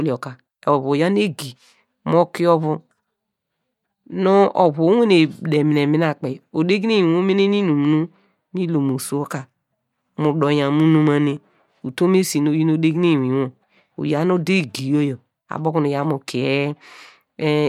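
No technical faults can be heard anywhere in this speech recording, and the signal holds steady throughout.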